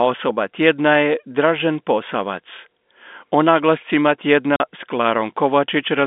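At 4.56 s the speech drops out completely and returns at 4.60 s, a 40 ms hole of silence with abrupt edges on either side. This is packet loss filled with silence: audio packets failed to arrive, and the receiver played nothing in their place instead of concealing the gap. The 40 ms length fits two lost 20 ms packets. The telephone band of roughly 200 Hz to 3.6 kHz, from the G.711 coding, is heard on either side of the gap.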